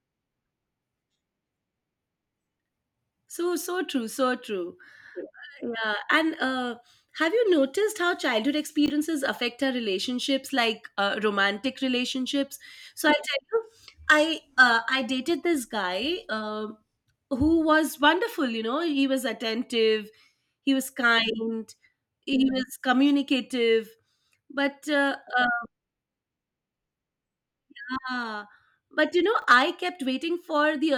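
A speech recording with two brief chunks out of order, at 8.86 s and again at 29.4 s. Each time a 20 ms slice of audio turned up one chunk late and got played after its neighbour, so nothing's missing, just swapped, giving a tiny jumbled blip at the hard joins.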